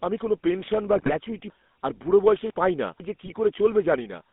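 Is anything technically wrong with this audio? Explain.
Yes, there are three kinds of fault.

GSM full-rate codec throughout: the sound sits in a narrow 200 Hz to 3.6 kHz line band with a buzzy, gravelly roughness, consistent with the 13 kbps full-rate codec. Its pulse-driven vocal-tract model discards fine excitation detail. Unlike plain band-limiting, the texture itself is coarsened, not just dulled.

GSM bit errors from 0.93 to 1.16 s and from 3.26 to 3.33 s: corrupted filter, pitch or gain values bend the spectrum or spike the level frame by frame, producing squawks, pops and gargling. Unlike dropouts, the sound distorts instead of going silent.

Chunks out of order from 1.5 to 3.0 s: one 500 ms chunk plays two chunks late, after the ones that should follow it. Nothing is missing, but the sequence jumbles, with three hard joins. Unlike dropouts or repeats, all the material is present, just misplaced.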